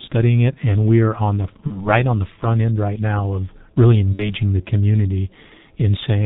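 Throughout the speech, the G.723.1 codec is at work. Nothing reaches above 4 kHz, and the coding damage is heavy: the voice is muffled and hoarse, and consonants smear together. This fits the coarse 6.3 kbit/s mode, where the vocal-tract model is refreshed only every 30 ms. Simple band-limiting would leave the audio dull but clean. Here the roughness and blurred articulation come from the codec's slow, approximate modelling.

At 1.67 s, VoIP packet loss concealed by the speech codec sets in and lasts until about 1.89 s. The gap is short enough to point to one missing 30 ms frame. The decoder fills it by repeating its last pitch and filter at falling gain, so the sound stretches into a brief buzzy tone or coloured noise. The damage outlasts the hole itself, because the following frames rebuild from that bad state.

A second concealment runs from 4.14 s to 4.34 s. Here about 60 ms, or two frames, were lost. 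A plain dropout would leave silence or a click. Here the lost audio is replaced by a fading smear that stays weak for a moment after the stream resumes.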